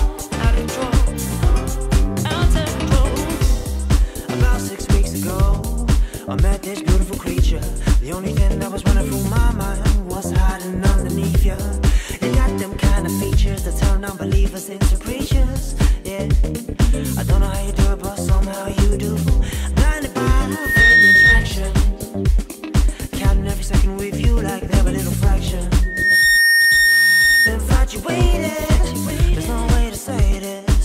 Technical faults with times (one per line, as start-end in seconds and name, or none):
20.50-21.54 loudspeaker feedback squeal
25.82-27.54 loudspeaker feedback squeal